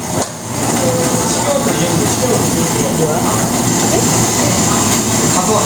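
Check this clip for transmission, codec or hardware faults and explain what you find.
Gain pumping is present throughout the clip. The likely cause is input gain set far too high for the microphone, with a fast limiter or compressor clamping down each time a loud sound arrives and releasing in the gaps. The level swings by roughly 10 dB as a result, so loud and quiet parts sit close together and the sound comes across squashed.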